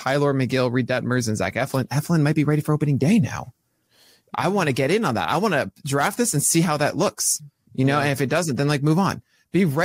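No technical faults can be heard anywhere in the speech recording, and the signal stays continuous and stable throughout.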